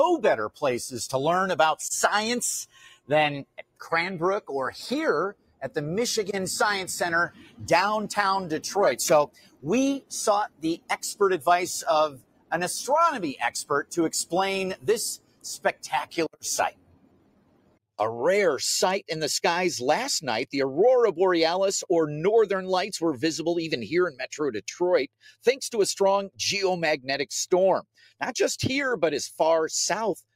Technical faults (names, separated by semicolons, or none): noise suppressor applied to music or sounds; sound cut by the noise suppressor